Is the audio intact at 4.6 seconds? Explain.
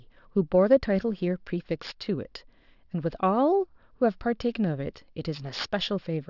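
No. Aliasing runs through the whole clip, including 4.6 seconds. The speech sounds like it was downsampled, which fits a drop from 24 kHz to 12 kHz, without a filter first. Content above 6 kHz folds back as false tones, roughly 20 dB below the speech, making sibilants gritty and metallic.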